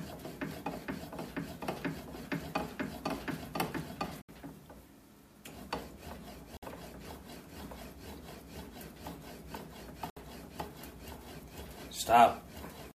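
Three times the sound drops abruptly to silence and then carries on: at 4.22 s for about 73 ms, at 6.57 s for about 57 ms, and at 10.10 s for about 65 ms. Each gap is a clean hole rather than a fade. These are likely Bluetooth stalls, where interference delayed packets long enough for the headphones' buffer to run empty, pausing playback until the resent audio arrived.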